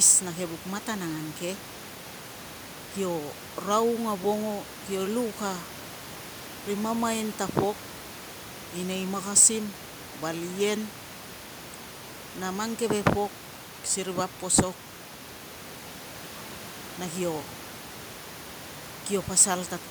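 Speech recording with no technical faults; the room's ambient background sits about 18 dB below the speech and belongs to the recording itself.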